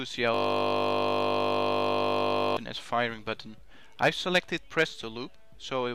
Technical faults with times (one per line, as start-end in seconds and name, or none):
0.34-2.57 system hang loop